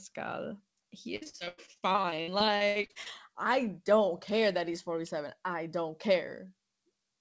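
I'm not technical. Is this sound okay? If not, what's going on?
No. From 1.16 to 3.08 s, repeated packet loss broke up the call, with missing chunks patched over, so the speech sounds choppy and robotic.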